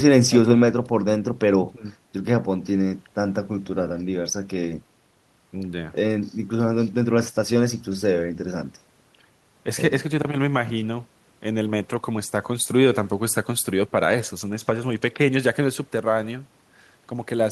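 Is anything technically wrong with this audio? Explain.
No, nothing technically wrong can be heard in this audio. The speech comes through with no audible faults from beginning to end.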